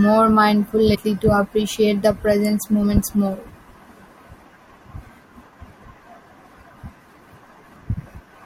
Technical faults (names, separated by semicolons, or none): compressed frames skipped